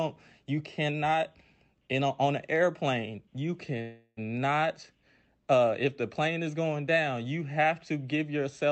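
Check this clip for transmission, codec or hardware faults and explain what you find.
One transmission fault is present: a call audio freeze from 3.81 s to 4.19 s. For about 0.36 s the receiver stretches the last sound into a fading buzz-like fill, ending in roughly 20 ms of near silence before the speech resumes exactly where it stopped. Nothing is lost; instead a gap of about 0.36 s is inserted, shifting the rest later. Packets were likely held up in transit, draining the jitter buffer. Throughout, the Opus call path limits the sound to about 8 kHz.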